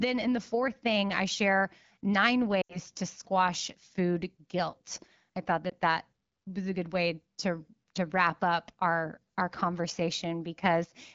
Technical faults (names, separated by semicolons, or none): lost AMR speech frames